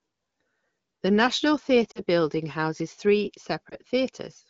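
From 1.91 to 2.01 s, just before "building houses three", lost AMR speech frames cause a brief smear and sag. About 40 ms is missing, which fits two dropped frames. The decoder repeats the last good pitch and vocal tract settings at falling gain, so the sound stretches and weakens. From 3.69 to 3.76 s, just after "building houses three", one lost frame gives a short dip and warble. The surrounding AMR wideband coding stays clear.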